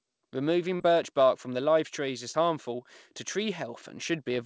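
At 0.76 to 0.82 s, just before "birch bark from live", and again at 2.32 to 2.35 s, between "bark from live trees" and "harmful to", short concealed packet loss produces a brief smear as the receiver stretches the preceding sound across gaps of 40 and 20 ms. Unlike a plain dropout, there is no silence or hard click.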